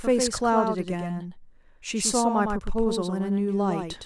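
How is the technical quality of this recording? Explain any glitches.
The recording has a doubled audio track throughout. A second copy of the speech trails about a tenth of a second behind. It sits around 5 dB quieter, without decay or room colour. A slower capture path likely recorded the signal twice.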